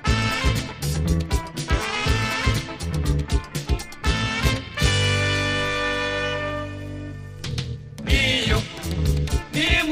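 Overlap-add ripple runs from start to finish: the sound was split into windowed frames and rejoined with overlaps that don't sum to constant gain, so level dips about 6 dB once per frame, around 300 times a second, giving a metallic buzz with extra tones around each note.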